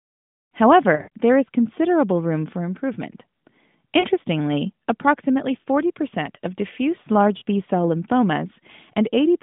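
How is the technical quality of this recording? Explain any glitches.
The quality is marred by lost AMR speech frames, three brief bursts heard against a narrowband phone sound whose 150 Hz to 3.6 kHz band and light coding grit point to AMR-NB near 12.2 kbps.

From 0.96 to 1.09 s, just before "there is considerable room", about 100 ms goes missing, scattered over 160 ms with a longest gap of 60 ms. Shorter 40 ms losses fall at 4.00 to 4.06 s and at 7.38 to 7.43 s, right after "of diffuse". Each time the decoder repeats the last good pitch and vocal-tract settings at falling gain, so the sound smears, warbles and sags in level rather than cutting to hard silence. That fading, stretched tone separates it from a clean dropout or a digital click.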